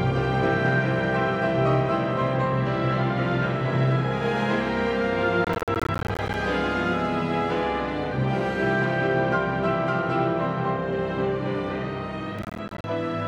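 The audio has two bursts of processor overload crackle, at 5.45 to 6.34 s and 12.39 to 12.84 s. Repeated missed processing deadlines leave rapid, hard-edged silent gaps of roughly 10 ms each, which fits a buffer of about that size, producing gritty tearing that stops when the load clears.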